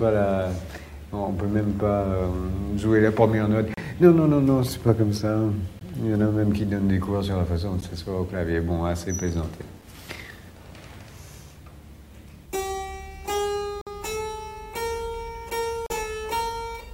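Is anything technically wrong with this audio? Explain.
Yes. There are gaps between stream segments at 3.74–3.77, 5.79, 7.81, 9.82, 13.81–13.87 and 15.86–15.90 s, repeating on a 2-second cycle. The time stamps of neighbouring segments don't meet, so the player fills each gap with silence. The result is hard-edged dropouts of 4 to 53 ms. On the waveform each one is a flat strip at zero, and on a spectrogram it is a clean vertical blank band.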